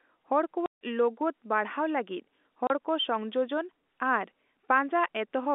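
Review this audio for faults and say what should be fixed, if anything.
Packet loss filled with silence cuts the speech at 0.66 to 0.80 s and at 2.67 to 2.70 s. About 150 ms and 30 ms vanish with hard edges, which fits 30 ms packets dropped and replaced by silence. Narrowband G.711 telephone band limiting is audible throughout. Packet loss concealment and a larger jitter buffer would mask such gaps.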